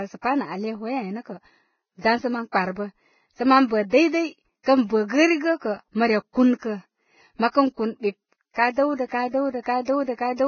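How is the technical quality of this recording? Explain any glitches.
The recording is degraded for its whole length by heavy lossy-codec damage, most likely Vorbis compression at a low quality setting.

Vorbis compression, throughout: there is nothing above 6.6 kHz, so the speech sounds dull and band-limited. Below that cut-off, the treble that remains is grainy and hissy, with sibilants turned into coarse noise and consonant onsets blurred. This comes from the codec quantising its residue so coarsely that fine detail is replaced by noise of similar energy, which fits a bitrate of roughly 16.6 kbps.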